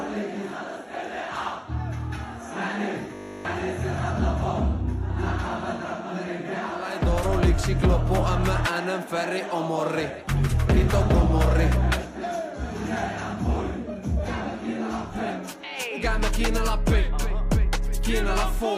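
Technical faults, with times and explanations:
3.15 to 3.45 s, robotic sound from repeated short buffers: the sound becomes a rigid, metallic 50 Hz buzz. The likely cause is starved playback looping the last 20 ms or so throughout, so the repetition imposes that fixed pitch while real audio is skipped.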